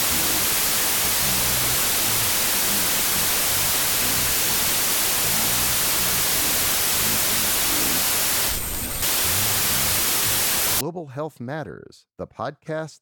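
From 0 to 10.81 s, wrong sample width: speech sits buried in loud noise at half speed and an octave low, which fits 32-bit samples read as 16-bit.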